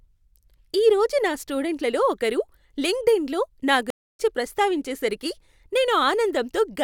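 At 3.90 s, just after "స్టూడెంట్లలో ఒకరు లింక్డ్ఇన్లో నా", the speech stops dead. This is a stream reconnect. The connection dropped, the player went quiet, then reconnected and started a new decoder partway through the stream. The gap lasts about 0.29 s, ending at 4.21 s. When the speech returns, it picks up a little later than where it broke off, roughly 0.15 s on. That short stretch is simply missing, so the phrase jumps forward.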